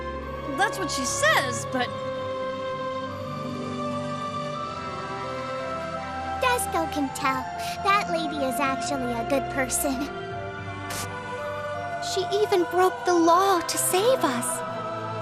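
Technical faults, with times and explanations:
Throughout, MP2 compression: the sound is dull and gurgling, with upper bands flickering out. Likely too few bits per sub-band, fitting an 80 kbps rate.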